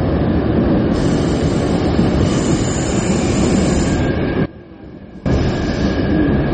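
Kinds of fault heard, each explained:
MP3 compression: Plainly audible watery, swirling coding damage runs throughout, and nothing remains above 8.4 kHz. This is likely a low bitrate, around 32 kbps.
One channel inverted: From 4.46 to 5.26 s the sound drops by about 20 dB, likely because one polarity-reversed channel cancels the shared content when mixed to mono.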